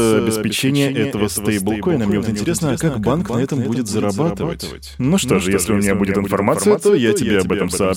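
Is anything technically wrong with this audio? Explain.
Yes. A doubled audio track runs throughout: the speech is heard twice, with a full-band second copy trailing roughly a fifth of a second behind and a few decibels quieter, likely from the signal being captured again through a slower path. The repeat has no decay or room colour.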